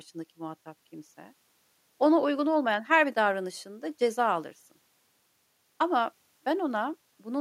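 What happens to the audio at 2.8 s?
Nothing goes wrong at 2.8 s; the speech there is intact, with no dropout, click or distortion.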